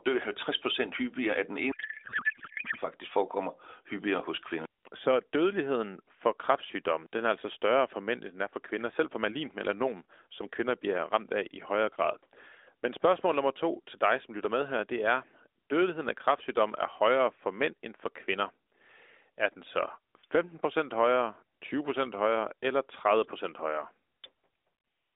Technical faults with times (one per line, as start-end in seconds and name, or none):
1.72-2.78 codec payload misread